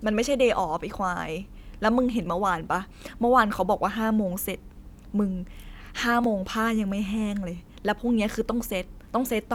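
At 2.26 s and again at 6.24 s the speech skips abruptly, with about 20 ms of audio gone. The 4.0 s spacing points to audio missing between chunks, likely from the recorder dropping material at each chunk handover and butting the two sides together.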